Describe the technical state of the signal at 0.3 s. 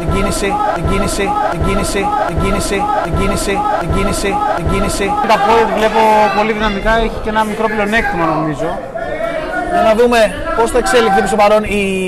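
A broken-record loop is under way from the start to 5.24 s. A 0.76 s fragment repeats six times back to back, likely from a stalled stream resending its last buffer.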